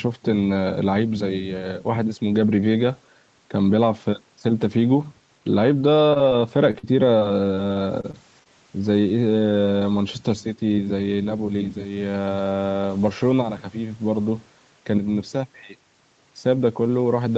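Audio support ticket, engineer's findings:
Short concealed packet loss, 6.09–6.17 s and 6.29–6.33 s. Brief smear/wobble in the speech. About 20 ms lost per event, two back-to-back at 6.09 and 6.13 s, a third at 6.29 s. Jitter buffer/decoder concealment extended the preceding sound over each hole, then cross-faded back into the real audio. A short consonant may drop out. Probable component: network path into the receiver.

Repeated packet loss (robotic sound), 6.71–8.47 s. Choppy, robotic speech with pieces missing across the span. The sound points to about nine dropouts, the longest near 42 ms, with roughly 200 ms of audio replaced by concealment, about 12% of the stretch. Each hole patched by continuing the last sound, and the next arrived before recovery. Probable component: sustained network loss or late delivery feeding the Opus decoder; the 8 kHz audio ceiling is the codec's bandwidth limit, at 32 kbps.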